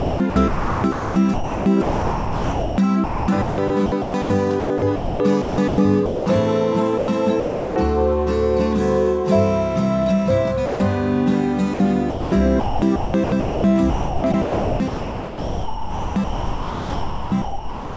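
From 0 to 6.26 s the sound is chopped by the voice detector. About 3.7 s is swapped for comfort noise, likely from the sender's detector toggling repeatedly. The result is choppy. From 6.98 to 7.76 s the same chopping returns, replacing about 0.46 s. At 10.66 to 10.80 s the sound is dropped by the voice detector. This is a single 140 ms gap of steady comfort noise rather than flickering, likely because the detector mistook quiet sound for background. From 11.74 s to the end at 17.97 s the chopping resumes, with about 4.7 s replaced. Throughout, nothing is heard above 8 kHz, which fits a G.722 call codec.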